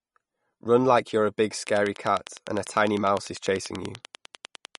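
From the start the speech carries plainly audible MP3 compression, likely from encoding at a bitrate that starved the coder, which fits something near 50 kbps. Nothing survives above 11.2 kHz, so the top is dulled, and the sibilants turn watery and swirling as weak frequency lines flicker on and off between frames. Unlike a simple low-pass filter, the damage moves and warbles instead of merely darkening the sound.

At 1.67 s, right after "like you're a big", a train of clicks begins and runs to 4.76 s. It is likely interference or a faulty connection injecting a pulse. The clicks come at a steady 10.1 per second, about thirty of them, roughly 10 dB above the speech, and they tick through pauses too. Their regular spacing and much the same shape set them apart from random crackle or vinyl-style pops.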